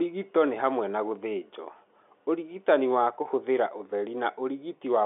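No technical faults can be heard in this speech clip. It has the narrow band of G.711 telephone coding, with the line passing roughly 250 Hz to 3.6 kHz, nothing above 3.8 kHz, and at most a faint trace of coding noise.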